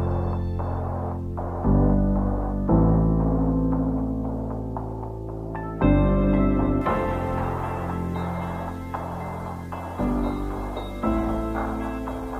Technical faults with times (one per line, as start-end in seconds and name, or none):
6.81-12.39 pre-emphasis left on